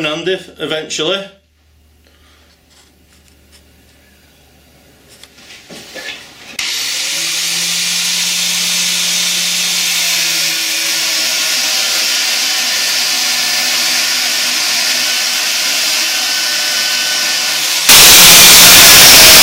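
At 17.89 s, the samples were likely stored as 32-bit floating point but read back as 32-bit integers, so each sample's sign and exponent bits, rather than its amplitude, decide the level. From there to the end at 19.43 s, the waveform turns almost square, sitting at an almost fixed, high level regardless of how quiet the material was. The sound jumps to a very loud, harsh buzz, with background noise raised to the same level as everything else.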